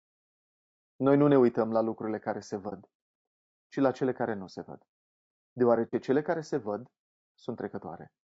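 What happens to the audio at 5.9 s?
Right there you get an AAC frame loss with muting, running from about 5.87 to 5.94 s, just before "cele care se văd". The decoder had nothing for that stretch and zeroed the spectrum, so the overlapping windows fade the sound down and bring it back up instead of cutting hard. It comes across as a soft-edged hole of around 60 ms, which fits two consecutive lost frames.

Underneath that moment, as through the whole clip, there's plainly audible codec damage, most likely from low-delay AAC compression (AAC-ELD, the video-call flavour). The low-delay windowing plus a tight bit budget leaves noise sitting between the harmonics and a thinned or synthetic-sounding top band, which fits a bitrate around 32 kbps.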